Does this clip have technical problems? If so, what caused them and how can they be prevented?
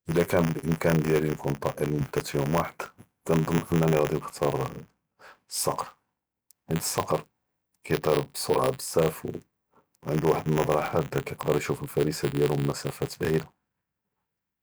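Yes. Buffer tearing runs through the whole clip, heard as a robotic buzz at 100 Hz that rides on the speech and drops away in the pauses. The program filling the ring buffer and the hardware draining it have drifted out of step, so they cross inside every 10 ms period. A small slice of each period, a couple of percent, plays audio left from a lap earlier, about 20 ms stale, with hard joins on both sides. To prevent it, keep the writer ahead of the read pointer with enough headroom, and resynchronise them whenever they drift.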